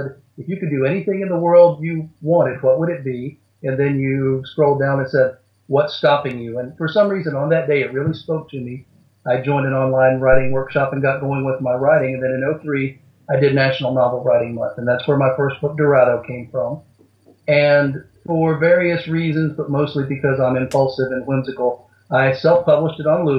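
A single phantom power thump cuts through the audio at 10.33 s and is gone by 10.68 s. It is a deep, dull low-frequency thud peaking at about -7 dBFS, then dying away with a decay of roughly 80 ms. The sudden DC step from the supply switching on or off at the input passes through the coupling capacitors. Unlike a handling bump, it carries no rustle or friction noise, just one smooth low-frequency pulse from a single step.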